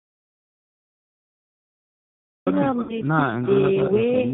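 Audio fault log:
throughout: echo with no canceller. The far end's loudspeaker feeds its microphone and nothing strips that signal out, so every phrase returns about a third of a second later as a thinner copy, sitting about 12 dB below the direct sound.
throughout: G.729 codec. The audio passes through an 8 kbit/s speech codec that models the vocal tract and pitch in place of the waveform, so nothing above 4 kHz survives and the sound has a narrow, slightly rough, synthetic edge that is plainly audible.
0.00 to 2.47 s: audio dropout to silence. The clip opens already in a gap of silence, with no room tone at all, which most likely comes from a lost input or link while recording continued. Whatever happened there is gone, and sound starts abruptly.
2.83 to 3.02 s: VoIP packet loss concealed by the speech codec. About 60 ms of packets went missing, and the decoder filled the hole by extending its last pitch and filter at falling gain. 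This gives a brief stretched, fading smear that stays weak after audio resumes.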